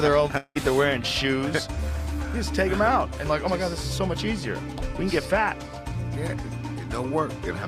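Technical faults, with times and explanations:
0.37 to 0.58 s, long network dropout: the sound turns into a fading buzzy continuation for about 180 ms, then about 50 ms of silence, and it resumes with about 180 ms lost. This is likely because packets stopped arriving and the receiver stretched the last sound to cover the gap.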